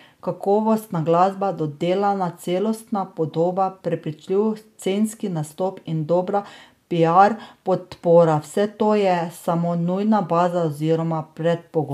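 No technical faults turn up anywhere in this speech recording, so there's nothing here to point to or explain.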